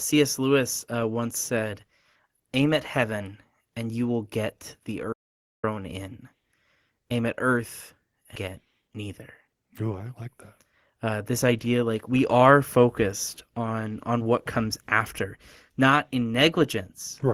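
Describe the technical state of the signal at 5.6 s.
At 5.6 s the input has likely been lost and silence written in its place: an audio dropout to silence from 5.13 to 5.64 s, just after "you will get the", leaves about half a second of dead silence with no room tone.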